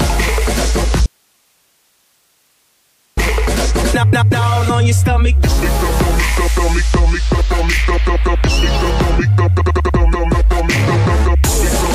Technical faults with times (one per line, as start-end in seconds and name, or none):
1.06-3.17 audio dropout to a faint residue